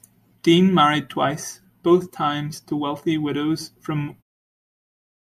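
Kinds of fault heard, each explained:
No faults are audible anywhere in this speech clip.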